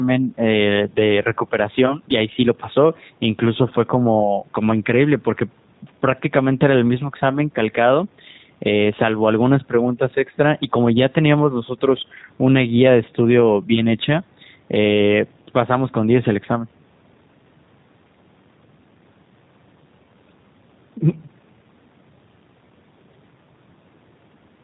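Throughout, G.729 codec damage: the speech, rebuilt from pulse models in a way that fits 8 kbit/s, sounds rough and synthetic rather than merely muffled, and stops at 4 kHz.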